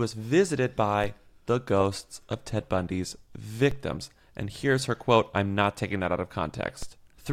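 Low thumps land at 1.04 s, just before "the ghosts of", at 3.71 s, and at 6.83 s, just after "taking that out of", while the speech carries on untouched. Each is a DC step: the waveform's zero line jumps by about -24 dBFS (about -26 dBFS for the last) and then decays through a 5 Hz high-pass.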